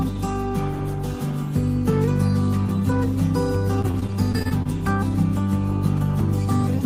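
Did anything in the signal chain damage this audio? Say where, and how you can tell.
Yes, the network hurt it. Between 3.81 and 4.67 s there's repeated packet loss, giving that robotic sound: about nine short holes, the longest around 27 ms, each patched by stretching the previous sound, so nearly a fifth of that stretch is filler, choppy and robotic.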